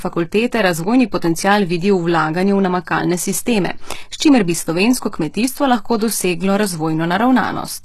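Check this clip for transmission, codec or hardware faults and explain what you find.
One codec fault runs through the whole recording: the speech carries plainly audible HE-AAC compression damage from start to finish. The top end stops dead at about 12.3 kHz, and the treble below that edge sounds synthetic, with s sounds turning gritty and lispy. The likely cause is spectral band replication, where only the lower spectrum is coded and the highs are patched in by copying lower bands upward under a coarse envelope, so the harmonics fail to align. The degree of damage points to a very low bitrate, around 16 kbps.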